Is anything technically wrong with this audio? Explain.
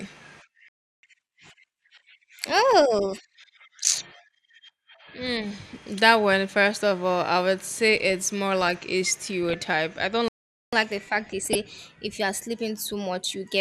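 Yes. The speech has two playback stalls, each followed by catch-up at higher speed, plus two bursts of DAB burbling.

A playback stall cuts the sound to silence from 0.68 to 1.03 s, about 0.35 s. The likely cause is the player running short of data. A second stall runs from 10.28 to 10.73 s, right after "I don't".

Catch-up at higher speed follows each stall. From 1.03 to 3.35 s the player resamples its backlog at 1.15 times speed, raising pitch about two semitones. From 10.73 s to the end it plays 1.1 times fast, roughly one and a half semitones higher.

DAB burbling appears from 9.49 to 9.54 s, between "it's more like a" and "I don't", and again from 11.45 to 11.55 s. Bit errors slipped past error correction and corrupted the audio data across a few frames. The result is brief blips of noise over the speech.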